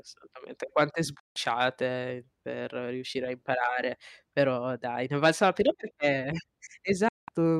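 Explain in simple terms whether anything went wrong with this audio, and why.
Two short gaps break up the speech, at 1.20 to 1.36 s and again at 7.08 to 7.29 s. Both are a digital broadcast dropout. The receiver stopped getting usable data, so it quickly faded the sound out, in about 3 ms, and stayed silent until good data arrived again. Whatever was said during those gaps, roughly 0.16 s and 0.19 s, is simply gone.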